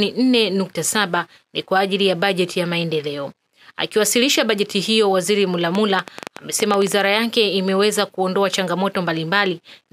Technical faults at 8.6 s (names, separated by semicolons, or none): none